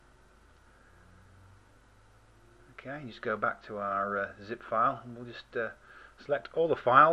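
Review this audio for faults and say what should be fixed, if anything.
No faults can be heard; nothing needs fixing.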